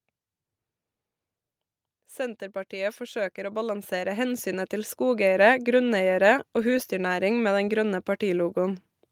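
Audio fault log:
2.16–5.34 s automatic gain rising: the gain control judged the speech too quiet and ramped up about 13 dB, so voice and background swell together.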